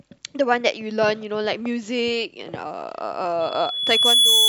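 Loudspeaker feedback squeal starts at 3.40 s and runs to the end of the speech. A microphone is picking up its own loudspeaker, and at 3.4 kHz the loop gain passes one. The tone swells over under a second into a squeal roughly 10 dB above the speech.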